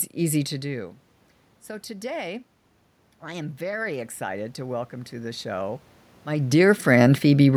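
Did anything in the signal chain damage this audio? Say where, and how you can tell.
Yes. Automatic gain rising, 3.2 to 5.9 s, in call processing: the input fell by about 16 dB, so the gain control slowly lifted its gain by about 5 dB. You can tell because the voice and room noise swell together over nearly three seconds.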